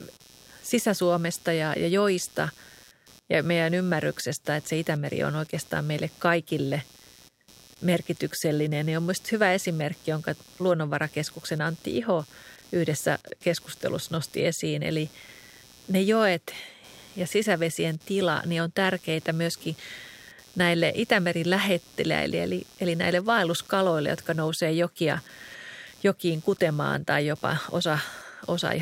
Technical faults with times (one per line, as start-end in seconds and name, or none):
0.00-28.82 computer activity noise